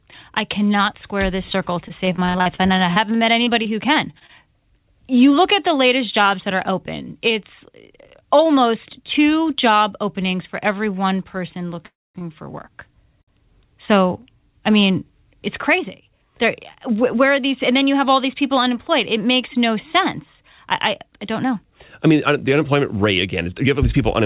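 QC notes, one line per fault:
1.88–4.31 s, repeated packet loss (robotic sound): 18 gaps, longest 46 ms, sound choppy and robotic as each hole is patched by continuing the previous sound, roughly 15% of the stretch.
6.73–10.07 s, jitter buffer speed-up: delivery runs at 101% speed with pitch unchanged, as the receiver trims pitch-period slices, about 50 ms in all, to shrink excess buffered delay.
11.86–12.17 s, call audio freeze: last sound carries on briefly then drops to silence for 220 ms before resuming where it stopped, likely a jitter buffer left empty by held-up packets.
12.19 s, 13.22–13.30 s, short stall from a late packet: sound is held too long, 22 ms and 58 ms, as the buffer ran dry and stretched the last sound until the late packet arrived.
23.26–24.21 s, jitter buffer speed-up: speech hurries to 106% at the same pitch, about 70 ms removed in small pitch-period cuts to bring buffer delay down.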